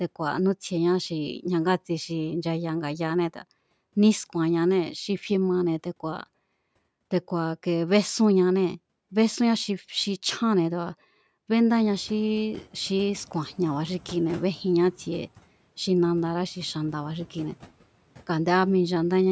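Around 11.5 s the room noise jumps, and from 11.72 to 12.74 s the noise suppressor is catching up, letting the noise through before pulling it down about 5 dB.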